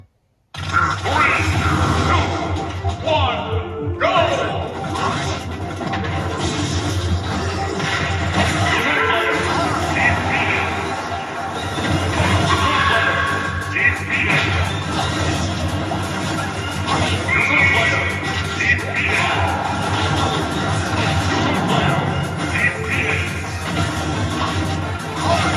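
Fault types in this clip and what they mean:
Nothing wrong turns up anywhere in this one; there are no glitches or oddities to point out.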